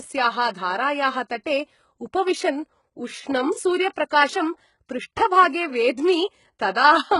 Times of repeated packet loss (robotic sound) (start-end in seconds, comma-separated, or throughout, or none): none